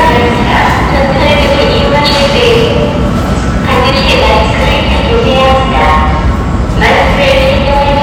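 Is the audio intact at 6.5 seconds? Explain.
No. At 6.5 s, as throughout the clip, the everyday sound is hard clipped. It is driven about 9 dB past what the stage can pass, so a small fraction of samples have their peaks cut flat. That adds high harmonics, heard as harsh fuzz on loud moments.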